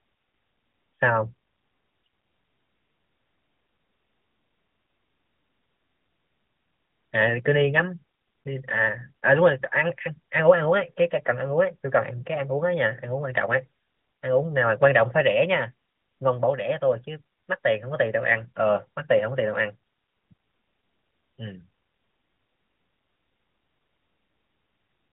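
No technical faults can be heard in this speech recording. It arrives over an AMR-NB narrowband mobile codec link at 12.2 kbps, which confines the sound to a telephone band of about 150 Hz to 3.5 kHz and leaves only light codec damage.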